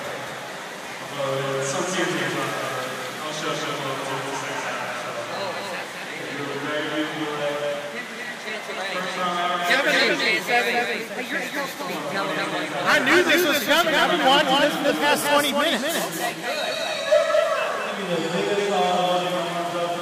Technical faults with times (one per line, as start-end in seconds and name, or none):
0.00-20.02 doubled audio track